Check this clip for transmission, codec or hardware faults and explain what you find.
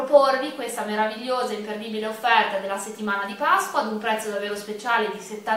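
No faults can be heard anywhere in this clip. Nothing along the signal chain calls for comment.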